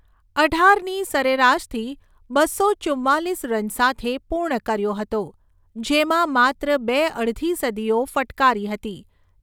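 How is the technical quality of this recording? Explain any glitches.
No technical glitches are audible.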